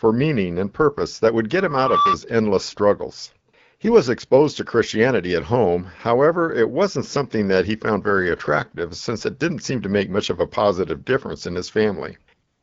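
Loudspeaker feedback squeal, from 1.55 to 2.18 s: a microphone is picking up the loudspeaker it drives, and at 1.2 kHz the gain around that loop rises above one, so the tone feeds on itself. It swells over roughly half a second into a steady whistle that ends up a few decibels louder than the speech, then stops at 2.18 s.

AMR comfort noise appears three times: 3.51 to 3.53 s, 3.77 to 3.79 s, and from 12.47 s to the end at 12.63 s. The phone judged the talker silent and stopped sending speech frames for 20 ms, 20 ms and about 156 ms, and the receiver filled those gaps with synthetic noise built from a rough level and spectrum. The real background gives way to a smooth, even hiss that switches in and out. The wideband codec carrying the speech adds only light colouring, which fits a rate of about 12.65 kbit/s.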